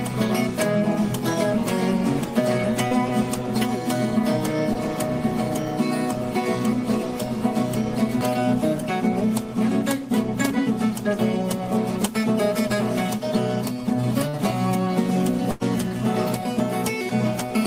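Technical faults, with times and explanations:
2.87 s, 4.73 s and 14.29 s, short concealed packet loss: roughly 40, 20 and 40 ms never arrived, so the receiver stretched the previous sound over each gap, leaving brief smears or wobbles.
15.51 to 15.63 s, burst of packet loss: about 100 ms went missing in a row. The receiver kept extending the last sound while fading it, then jumped ahead with that stretch gone.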